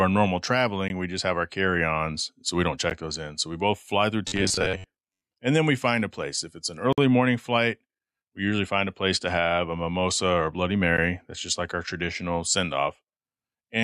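Stream segments about 2 s long are joined with timing gaps, which the player fills with hard-edged silence at 0.88 s, 2.90 s after "ons so we don't", 6.93 to 6.98 s (51 ms) after "it's an", and 10.97 s. From 4.28 to 5.23 s, between "we both fly through" and "and then we find", the likely cause is audio arriving too seldom and the software repeating a short buffer. That replaces about half the speech with a rigid, metallic 93.8 Hz robotic buzz, which fits a buffer of roughly 10.7 ms.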